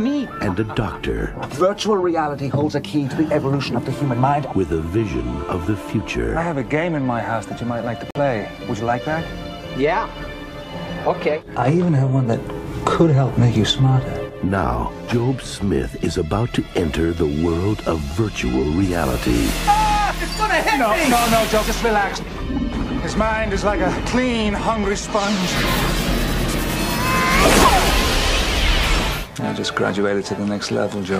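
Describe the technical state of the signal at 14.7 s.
At 14.7 s the signal is intact, with no dropout, distortion, glitch or other technical fault audible at that moment.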